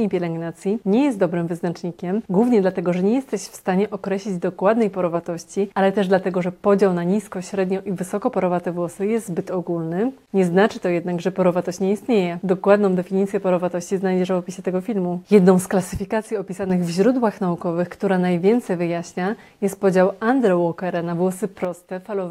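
At 15.97 to 16.70 s and 21.65 s to the end, level abruptly drops about 6 dB, a visible waveform step, likely one channel dropping out.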